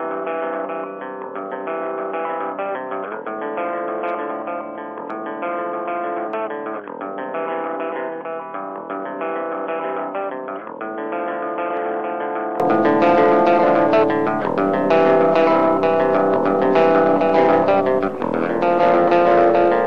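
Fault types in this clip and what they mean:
Input switched to a poorer device: 0–12.6 s, sound dull, cut above 3.4 kHz, about 10 dB quieter, likely a narrowband device, switching back gaplessly.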